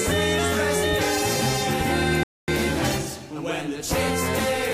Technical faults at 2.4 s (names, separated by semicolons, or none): rebuffering stall